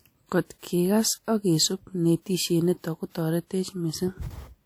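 Pre-echo appears from 3.10 to 3.15 s in this speech, a smear of about 51 ms. The transform codec spread quantisation noise across its whole block, so noise meant for a sharp attack leaks into the quiet just before it, heard as brief hiss preceding the onset.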